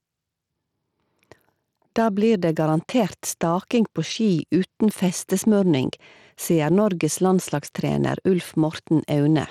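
Right from the start and all the way through, the speech has gain pumping. The level swings by around 5 dB, so everything sounds squashed, likely from gain set too high with a fast limiter clamping down.

On top of that, plainly audible Bluetooth SBC compression runs the whole length. The top end keeps flickering and dropping out, with a gritty, aliased haze over the speech. That's likely a starved SBC link, and the damage fits something around 96 kbps.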